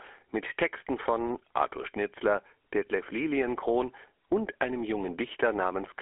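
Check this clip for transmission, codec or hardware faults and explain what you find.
GSM full-rate codec damage runs throughout. The signal is confined to a 300 Hz to 3.4 kHz phone band with nothing above 3.8 kHz. Coarse pulse excitation leaves a plainly audible buzzy, gravelly roughness, consistent with 13 kbps coding.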